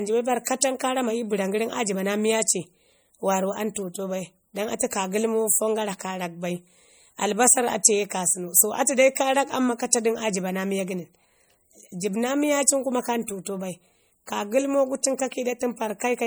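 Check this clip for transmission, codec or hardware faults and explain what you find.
Two codec faults are audible: compression damage across the whole clip and a brief pre-echo before one attack.

Throughout, the speech has a plainly audible watery, swirling quality, with chirpy, metallic edges on sibilants and softened onsets, and nothing above about 21 kHz. This is likely MP3 compression at a low bitrate, near 48 kbps: starved of bits, the encoder zeroes weak frequency lines that flicker between frames.

At 9.15 s, a hiss lasting about 13 ms runs just ahead of a sharp attack, which sounds smeared. This is pre-echo: the transform codec spreads quantisation noise across its whole block, so noise sized for the loud attack also fills the quiet moment before it.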